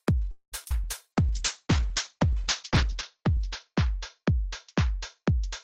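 From 0.31 to 0.55 s the sound stops and is replaced by a decaying continuation of the last sound, about 205 ms of fill that includes roughly 60 ms of silence. Playback then resumes exactly where it left off, with nothing lost. This is a call audio freeze, likely caused by packets stalling in transit until the jitter buffer ran dry.

Between 0.64 and 0.68 s there is a short concealed packet loss. About 40 ms of audio never reached the decoder in time, and the receiver patched the hole with 14 ms of extrapolated signal. It is heard as a brief smear where the original material should be.

Immediately after, between 0.69 and 0.74 s, playback skips ahead. Roughly a tenth of a second of audio is dropped, and the two sides are joined with only about 12 ms of fill. The effect is an abrupt forward jump.

From 0.84 to 2.44 s a jitter buffer slow-down repeats pitch periods and pause fragments to rebuild its reserve, adding 82 ms. 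The sound runs at 95% speed with unchanged pitch, so it comes across as slightly drawn out.

From 1.17 s to the end there is a call bitrate drop. Coding becomes coarse and rough, which fits a fall from 32 to 8 kbps, and the upper band is cut from 20 kHz to 8 kHz, leaving the audio muffled. The worst quality lasts about 1.6 s.

A second jitter buffer slow-down runs from 2.92 to 3.37 s. It adds 40 ms and plays at 93% speed, so this stretch is again stretched out at the same pitch.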